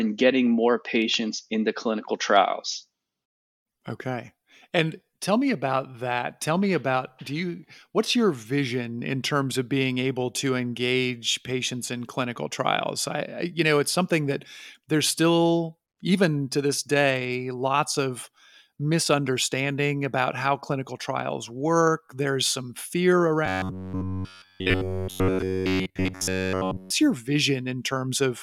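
From 23.46 to 26.90 s, the speech becomes robotic. A rigid 93.8 Hz buzz suggests it's likely caused by repeated short buffers, about 11 ms each.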